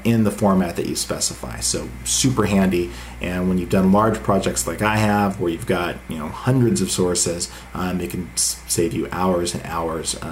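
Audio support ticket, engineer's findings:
Mains hum, 1.56–5.17 s: steady 60 Hz tone with low harmonics, roughly 20 dB below signal. Probable ground loop or nearby transformer coupling the power line into the signal path. Hum absent outside this window.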